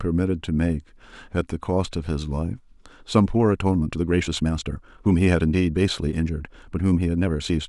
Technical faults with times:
3.09-7.68 time-stretched section

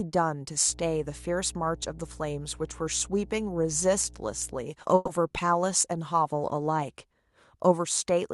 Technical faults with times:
0.66-4.65 mains hum
4.95-5.09 call audio freeze

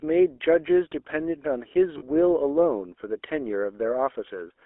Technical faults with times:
0.00-4.66 GSM full-rate codec
1.98-2.03 lost GSM frames

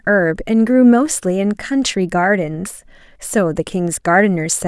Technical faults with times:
none

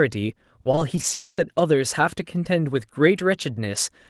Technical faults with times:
0.63-1.13 repeated packet loss (robotic sound)
1.13-1.39 long network dropout

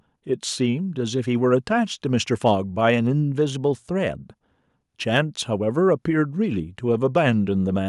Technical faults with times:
none

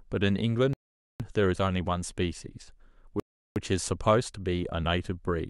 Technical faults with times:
0.73-1.20 rebuffering stall
3.20-3.56 rebuffering stall

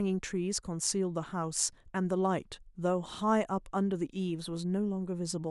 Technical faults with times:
none

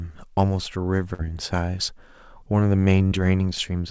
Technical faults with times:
1.14-1.23 burst of packet loss
3.07-3.14 short concealed packet loss

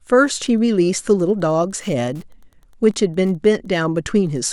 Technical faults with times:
0.00-4.53 Wi-Fi interference

